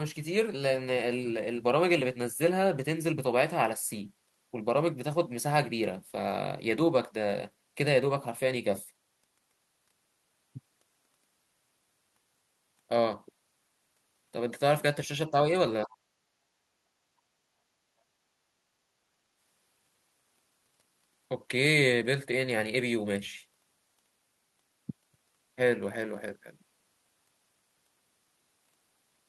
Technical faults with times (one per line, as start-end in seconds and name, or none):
15.30-15.47 speech suppressed in double talk
15.84-15.91 speech suppressed in double talk
16.19-16.75 background gated by the echo canceller
17.12-18.50 background gated by the echo canceller